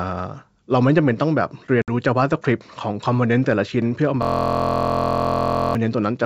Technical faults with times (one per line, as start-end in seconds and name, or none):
1.82-1.89 packet loss on an ADPCM call
4.23-5.75 system hang loop